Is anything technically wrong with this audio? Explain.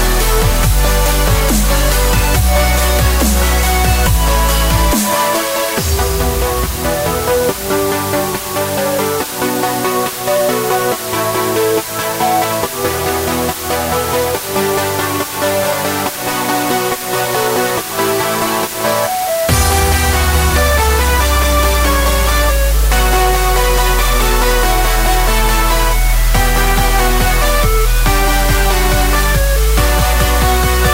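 Yes. For the full length the audio shows low bit depth with dither: it is quantised to only 4 bits, with dither added before rounding. The rounding error becomes a steady, even white hiss, roughly 10 dB below the signal, with no audible distortion.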